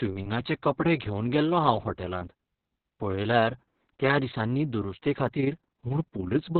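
Speech clip with heavy Opus voice compression throughout: nothing above about 4 kHz, hoarse, slightly robotic excitation, unlike plain low-pass filtering, which would keep the voice clean. This points to the narrowband SILK mode at a very low bitrate, around 6 kbps. From 5.28 s to the end at 6.59 s, an overlap-add ripple adds a level flutter of about 6 dB at around 30 Hz. Its steady per-frame rate sets it apart from codec burbling.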